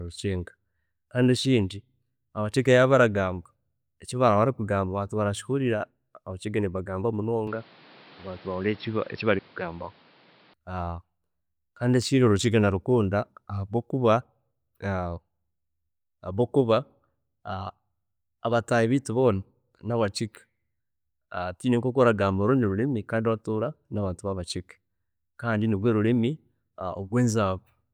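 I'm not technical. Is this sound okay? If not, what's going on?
No. There's an input switched to a poorer device from about 7.47 to 10.54 seconds. During that stretch the speech turns dull and boxy because nothing above roughly 5.4 kHz gets through, and a faint new background noise appears. The loudness stays about the same, and there's no gap at the changeover. The likely cause is the recording briefly switching to a lower-quality microphone, such as a headset in call mode, before switching back.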